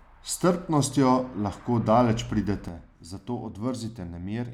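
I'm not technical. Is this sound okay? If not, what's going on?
No. At 2.68 s, right after "strpnostjo lahko daleč", there is a sudden gain jump. The speech and the background noise drop together to a noticeably quieter level and stay there to the end. A volume setting was likely changed instantly, without a smooth fade.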